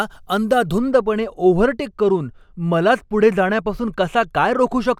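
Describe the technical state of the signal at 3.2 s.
At 3.2 s the speech is under de-emphasis applied wrongly, a fault running from 0.78 s to the end of the clip. A treble-cut filter meant to reverse pre-emphasis has been applied to audio that never had that boost, or applied a second time, so the highs are pulled down with nothing to offset them. At 10 kHz the level sits about 13 dB below 1 kHz, leaving the sound dull and muffled. A spectrogram shows the upper bands fading smoothly toward the top, while the waveform looks rounded and less spiky.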